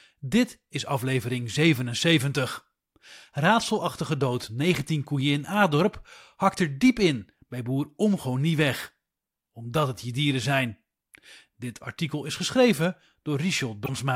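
Right near the end of this speech clip, from about 13.83 to 13.89 s, there's a quick glitch lasting roughly 56 ms. That's damaged data in a compressed stream: a stretch of the encoded file got corrupted, so the decoder misread those frames, lost its place and had to hunt for the next valid frame header. You hear a short glitch, and the audio then picks up again on the far side of it.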